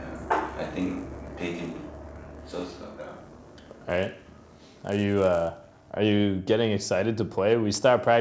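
A resampler restarted on every block from 0.00 to 5.74 s, each 10 ms block converted alone, probably 48 kHz to 16 kHz, leaving edge errors heard as a 100 Hz buzz.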